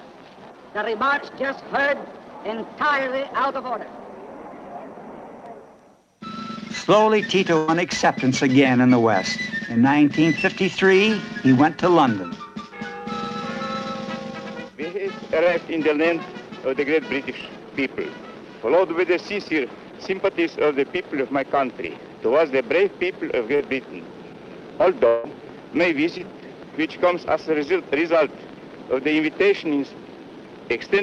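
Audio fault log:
7.57–7.70 s, burst of packet loss: About 100 ms of consecutive audio never arrived in time to be played. The receiver stretched the last sound across the hole, fading it as it went, so a held buzz or hiss replaces that stretch before the audio jumps ahead.
15.44–15.47 s, 23.55–23.61 s and 26.18–26.21 s, short concealed packet loss: Roughly 20, 40 and 20 ms of audio missed the decoder. Each gap was patched by continuing the previous sound and blending back, heard as a brief smear or wobble where a short sound may drop out.
25.07–25.26 s, long network dropout: The sound is held and fades for about 160 ms with no silent stretch, then resumes further on with that portion gone. The likely cause is a network dropout, during which the receiver could only extend the last audio it had.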